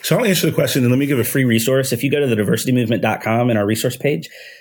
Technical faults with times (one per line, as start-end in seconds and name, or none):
1.23-4.61 section at the wrong speed